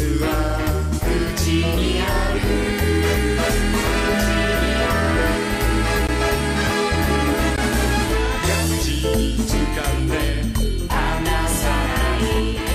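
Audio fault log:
6.07 s and 7.56 s, block of digital silence: the audio drops out for about 15 ms each time and comes back with no fade on either edge. At that length it sits right at the point where a gap stops registering as silence, so each one comes across as a quick tick or dip. A block of zeros like this means the output buffer wasn't filled in time or a calculation produced invalid values.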